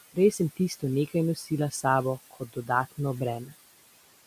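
Noise suppressor artifacts run through the whole clip. The suppressor estimates the steady room background, which sits about 18 dB under the speech, and pulls those bands down by about 16 dB whenever the talker pauses. The floor therefore sinks in the gaps and swells back under each phrase.

Speech cut by the noise suppressor first appears between 1.36 and 1.51 s. There the suppressor mistakes a soft stretch of speech for noise and turns it down by as much as about 9 dB, so around a tenth of a second sounds swallowed. The same fault returns more strongly from 2.31 to 2.69 s. The drop reaches about 16 dB, the full noise reduction, and roughly 150 ms of speech within that span fades to a faint, swallowed remnant before the level recovers.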